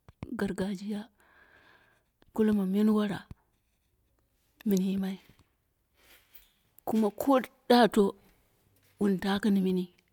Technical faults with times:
none

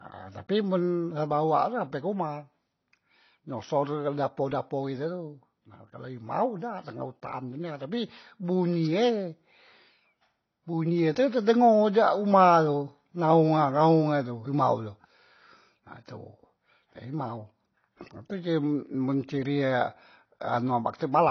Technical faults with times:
0.00-21.30 AAC compression

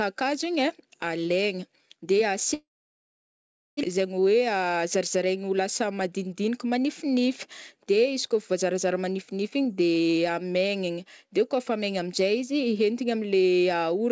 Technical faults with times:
2.54-3.85 long network dropout
3.97-7.21 jitter buffer speed-up

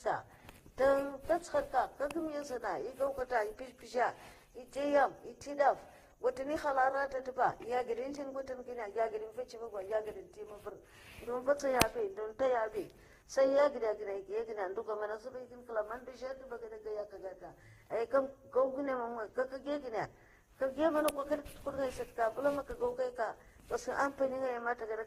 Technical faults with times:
0.00-25.07 transcoding between lossy codecs

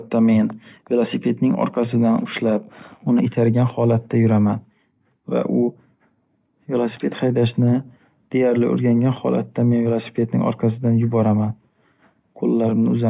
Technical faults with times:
none

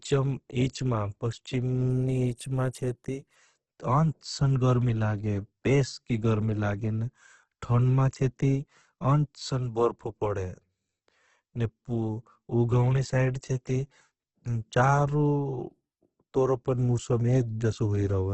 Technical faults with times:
0.00-18.33 Opus compression

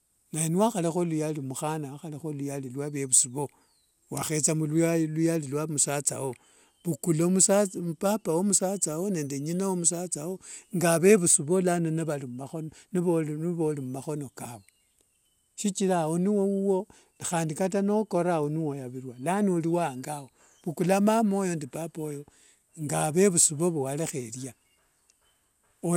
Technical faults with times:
0.00-25.97 generation loss

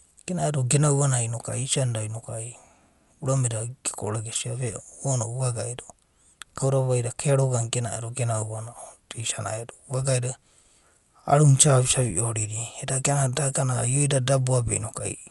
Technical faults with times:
0.00-15.30 Dolby Digital compression

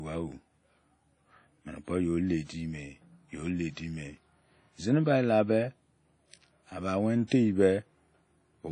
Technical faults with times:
0.00-8.72 WMA compression
7.27-7.31 pre-echo

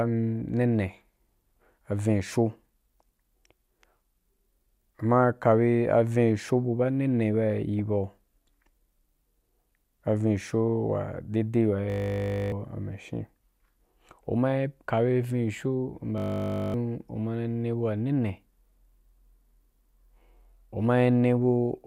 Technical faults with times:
7.79 DAB burbling
11.90-12.52 system hang loop
16.18-16.74 system hang loop

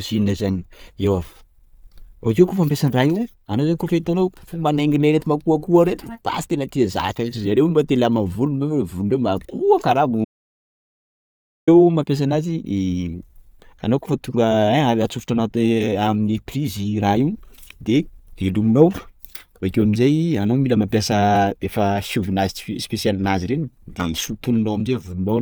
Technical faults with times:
10.25-11.67 audio dropout to silence

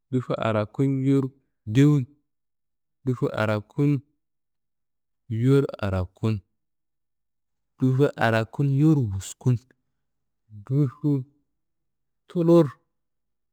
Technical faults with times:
1.17-13.52 crude rate conversion

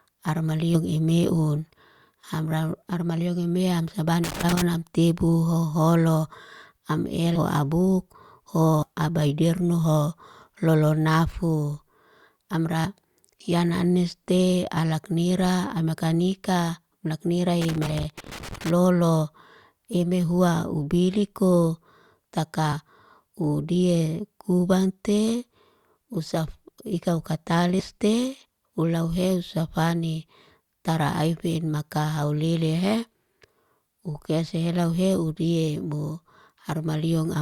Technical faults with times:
0.74-0.77 compressed frames skipped
4.24-4.62 loose connector crackle
7.35 compressed frames skipped
8.82-8.86 compressed frames skipped
12.84 compressed frames skipped
17.61-18.70 loose connector crackle
17.86-17.88 compressed frames skipped
22.72 compressed frames skipped
27.79-27.83 compressed frames skipped

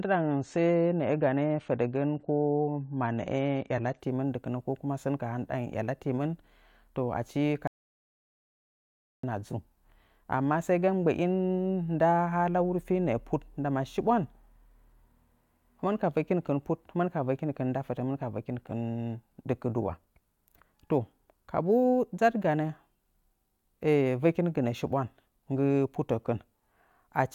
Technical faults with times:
0.00-4.00 adaptive stream starting at a low bitrate
7.67-9.23 audio dropout to silence

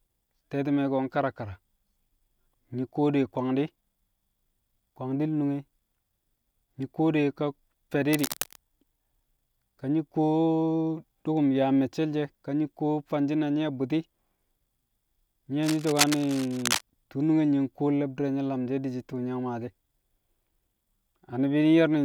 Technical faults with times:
8.12-8.56 cable scratch noise
15.63-16.81 cable scratch noise

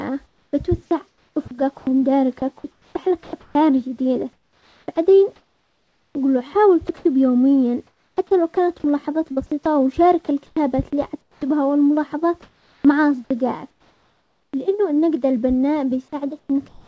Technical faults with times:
0.26-7.05 sound chopped by the voice detector
7.87-9.65 sound chopped by the voice detector
10.46-11.42 comfort noise in place of the background
10.53-10.56 onset clipped by the voice detector
12.42-12.84 comfort noise in place of the background
13.70-14.53 comfort noise in place of the background
14.50-14.53 onset clipped by the voice detector
16.39-16.87 comfort noise in place of the background

